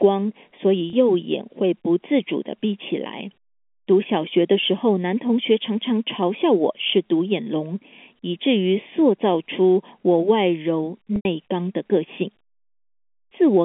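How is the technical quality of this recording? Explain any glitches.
The recording has two problems: a hollow, phasey colouring from a channel delay that runs through the whole clip, and two brief dropouts in the speech patched by packet-loss concealment. The audio is band-limited to the telephone range of about 200 Hz to 3.5 kHz, as G.711 A-law coding gives.

Channel delay (comb filtering) affects the entire clip. One channel lags the other by a fraction of a millisecond, and when the two are summed to mono, frequencies whose half-period matches that offset cancel. The first notch falls at roughly 1.5 kHz, with further notches evenly spaced above it. This puts a fixed hollow, phasey tint on the speech. On a spectrogram it shows as steady horizontal dark bands that stay put as the speech moves.

Packet loss with pitch repetition occurs at 0.90–0.93 s and again at 11.16–11.25 s. The first gap is 30 ms, consistent with a single lost packet. 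The receiver fills it by repeating the last pitch cycle, which sounds like a brief held buzz. The second is 90 ms, about three packets' worth, so the repeated cycle fades toward silence before speech cross-fades back in. In the waveform, both gaps show as identical periodic cycles that shrink in amplitude, and the spectrogram shows frozen harmonics where the speech should be changing.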